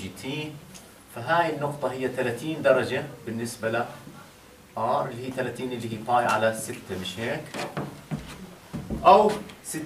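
No technical faults can be heard anywhere in the recording. Nothing in the audio calls for a timed note or a comment on its signal chain.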